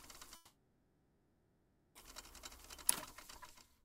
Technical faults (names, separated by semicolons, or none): long network dropout